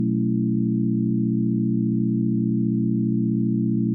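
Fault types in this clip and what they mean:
No faults detected; nothing audible to flag.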